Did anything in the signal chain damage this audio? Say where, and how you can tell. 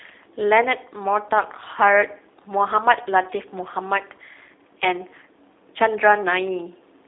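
Yes. Throughout, the speech sounds rough, slightly buzzy and synthetic, with nothing above about 3.8 kHz and a narrow telephone band. That points to the G.729 codec at the codec stage, which fits 8 kbit/s: each 10 ms frame is rebuilt from a vocal-tract filter, pitch predictor and sparse pulses.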